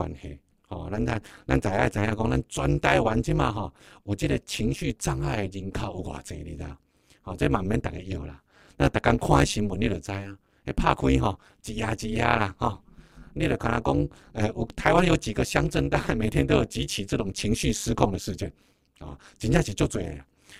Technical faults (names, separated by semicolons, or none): overlap-add ripple